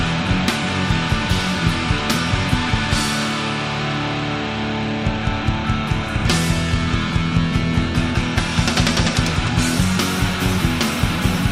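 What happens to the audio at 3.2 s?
Nothing goes wrong at 3.2 s; the audio plays through that moment intact, with no dropout, click, glitch or other audible fault.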